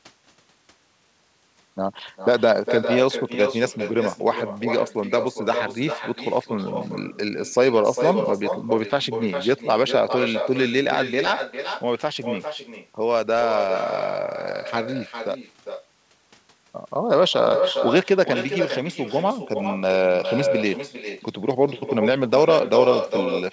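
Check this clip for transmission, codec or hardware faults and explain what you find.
There's one fault here, running through the whole speech clip: echo with no canceller. The far end is playing the call out of a loudspeaker, and its microphone is sending that straight back with nothing cancelling it. So every phrase returns roughly 0.4 s later, about 6 dB down, as a thinner shadow. The call path itself tops out at 8 kHz, which fits a G.722 wideband codec.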